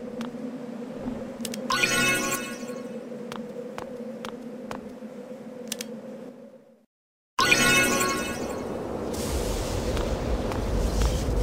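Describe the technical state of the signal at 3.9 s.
At 3.9 s the signal is intact, with no audible dropout, distortion, glitch or other technical fault at that point.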